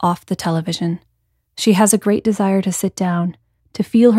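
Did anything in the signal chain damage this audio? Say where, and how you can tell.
Yes. From 2.10 s to the end at 4.19 s the speech turns dull and muffled, its treble rolling off smoothly to about 8 dB down at 10 kHz relative to 1 kHz. This is de-emphasis applied wrongly: a de-emphasis filter cut treble on audio that had no pre-emphasis, or was applied a second time.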